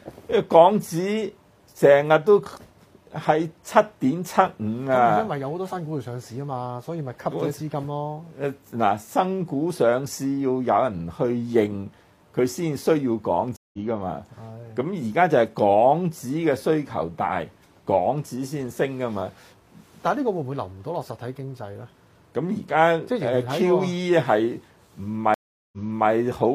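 Stream reconnects occur at 13.56 s and 25.34 s. Each time, the connection drops and the sound restarts from a fresh decoder. At 13.56 s, 168 ms of silence is followed by a jump ahead of about 150 ms. At 25.34 s, 383 ms of silence is followed by a replay of the preceding 372 ms.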